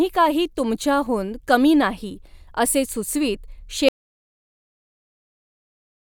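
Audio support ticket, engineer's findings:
Audio dropout to silence, 3.89 s to end of clip. Speech cuts off mid-flow into silence, with no decay, no fade and no room tone. Likely an input loss (device disconnect, link failure or mute) while the recorder kept writing silence. Unlike a noise gate or a dropped packet, the gap never recovers, has no short concealment fill and leaves no background noise behind. Content after 3.89 s is unrecoverable.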